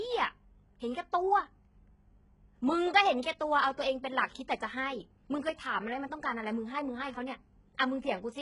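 From start to finish the speech has that gritty, metallic top end, with the s sounds coming out lispy and nothing above 11 kHz. It's likely HE-AAC compression, and the heavy damage fits a very low bitrate of around 12 kbps, where the treble is rebuilt from copied lower bands rather than kept.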